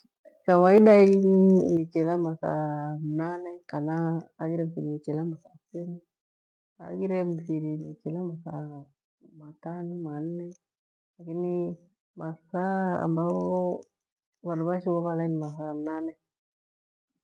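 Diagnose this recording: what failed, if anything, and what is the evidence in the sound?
Microphone overload, 0.77 to 0.96 s. At the converter stage, the loudest peaks here drive about 3 dB past full scale and their tops are sheared flat, with a few percent of samples pinned at the limit across that stretch. The result is a harsh, crackly edge on the sound's loudest moment. The likely cause is the microphone input volume being set too high for the level reaching the converter.

Microphone volume stepped down, at 0.78 s and again at 1.77 s. In call processing, the input level drops abruptly by about 3 dB and then by about 6 dB, taking voice and background down together, just before "chilaa mathaamnane" on the second step. The first drop lands right inside the clipped peak, which suggests the call software likely reacted to the overload by lowering the device's input gain in discrete steps rather than smoothly. 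The Opus call path carries these level changes through intact.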